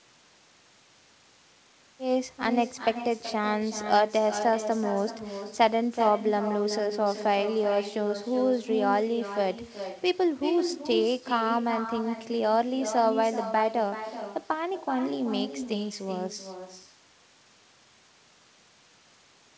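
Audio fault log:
Throughout: echo with no canceller. Each phrase of the speech returns roughly 0.4 s later as a quieter copy, about 9 dB down and thinner, because the far end's loudspeaker feeds its microphone and nothing subtracts it. The call path cuts everything above 8 kHz, which fits a wideband codec such as G.722.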